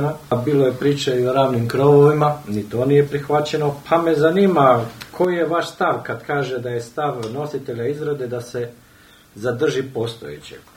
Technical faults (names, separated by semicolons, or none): one channel drops out